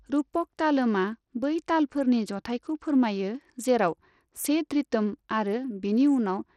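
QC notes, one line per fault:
throughout, Bluetooth SBC compression: likely a low-bit-pool SBC link starving its sub-bands, leaving gritty, flickering speech treble consistent with about 80 kbps, and nothing above 18.4 kHz.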